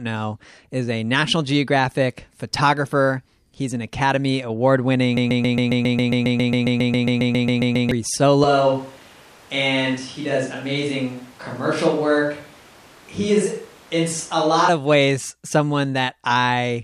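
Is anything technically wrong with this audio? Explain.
Yes, there are two problems in this speech recording.

From 5.17 to 7.91 s there's a broken-record loop: a 136 ms fragment repeats back to back about 20 times. Most likely the player or stream stalled and kept resending its last buffer, so whatever should have played there is gone.

From 8.44 to 14.69 s the sound abruptly switches to a distant microphone. It turns roomy and hollow with thinner bass, and the room noise rises to about 25 dB below the speech, while the overall level stays roughly the same. The close mic likely dropped out, leaving a farther one carrying the signal.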